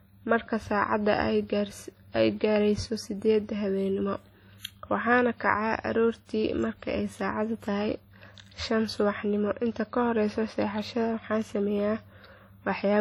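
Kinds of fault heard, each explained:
WMA compression: heavy transform-codec damage throughout, with ringing, washy smear and hiss pumping along with the speech, likely from a low-bitrate WMA encode around 32 kbps.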